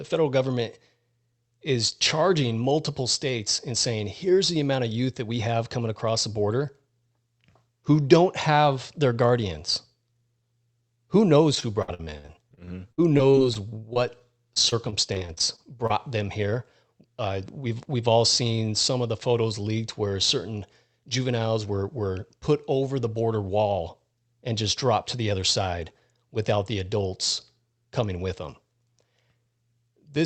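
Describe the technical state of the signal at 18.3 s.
At 18.3 s you're inside a jitter buffer speed-up that runs from about 17.85 to 18.51 s, just before "some of the photos". The receiver's buffer had built up more audio than it wanted, so it trimmed out short chunks a pitch period or so long, around 50 ms in total. The speech plays about 6% fast at unchanged pitch and sounds slightly rushed. Underneath, the call codec's top end stops around 8 kHz.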